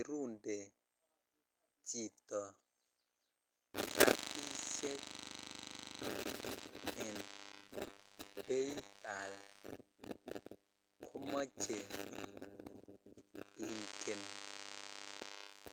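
From 7.61 to 10.29 s, a call bitrate drop coarsens the speech. It turns rough and muffled, consistent with 32 falling to 13 kbps, and bottoms out for 1.37 s.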